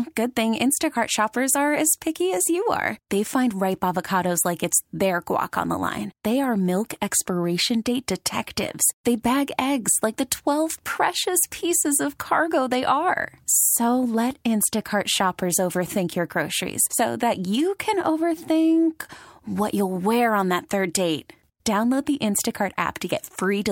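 No technical faults can be heard anywhere in the recording.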